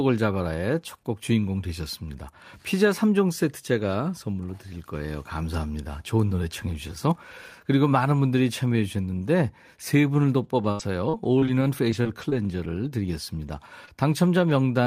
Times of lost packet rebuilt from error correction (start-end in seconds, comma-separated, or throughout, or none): 13.87-14.13, 14.39-14.51